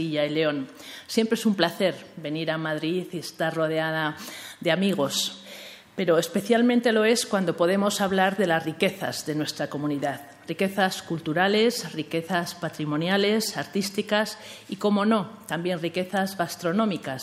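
Nothing here jumps out as a technical problem; it's just the sound, with nothing going wrong at any point along the way.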